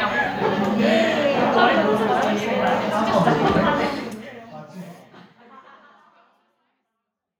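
No faults; the level tapers down gradually from around 4 s to the end with no click or hard edge, as a deliberate edit would.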